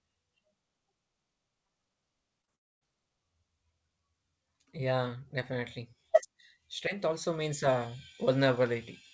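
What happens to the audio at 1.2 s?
Nothing goes wrong at 1.2 s: the speech carries on intact, with only the steady band limit near 8 kHz that the call path's wideband codec gives it throughout.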